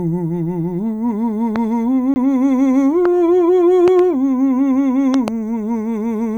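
At 1.56 s a single loud pop lands on top of the music, peaking roughly 10 dB above it while the music continues underneath. It is a short, sharp transient, the kind likely caused by a voltage step from a plug, switch, static discharge or driver glitch being passed through and shaped by the downstream circuitry.

From 2.14 to 2.16 s there is a block of digital silence: 20 ms of samples replaced by zeros. The audio drops out and returns with no fade, and the 20 ms gap itself registers as a brief hole rather than a single tick. This fits an output buffer that was not filled in time.

The pops recur at 3.05 s as a single hit, then as double pops from 3.88 to 4.01 s and from 5.14 to 5.30 s, each at about the same level, roughly 10 dB above the music.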